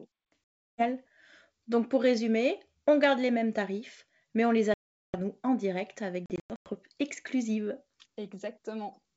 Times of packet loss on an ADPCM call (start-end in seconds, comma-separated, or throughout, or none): 0.45-0.84, 4.74-5.19, 6.26-6.69